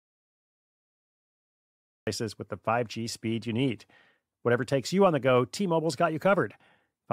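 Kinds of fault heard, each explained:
Audio dropout to silence: The clip opens in total silence, with no room tone or background hiss at all. This is already under way when the clip begins and lasts until about 2.07 s. Then the speech arrives abruptly, mid-flow, with no fade. A silence like this most likely means the input was lost, through a disconnected device, a failed link or a mute, while recording carried on. Whatever was spoken during the gap is gone.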